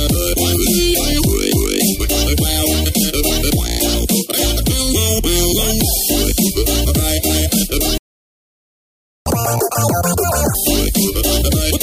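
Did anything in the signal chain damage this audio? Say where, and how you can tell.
Yes, at the playback stage. At 7.98 s the audio cuts out mid-flow and stays silent until 9.26 s, a gap of about 1.28 s, then resumes. This is a playback stall: the output had nothing to play for that stretch. The likely cause is the player's buffer running dry, or its output thread being blocked, so no samples reached the device until it recovered.

From 9.26 s to 10.55 s the sound runs at double speed and sits about ten semitones higher, then drops back to normal pace and pitch. This catch-up at higher speed is the player recovering from the stall. It resampled the backlog at 2.0 times the normal rate to regain the lost time, and because speed is raised by resampling, pitch rises with it. The matched 1.28 s durations of the gap and the fast section tie the two faults together.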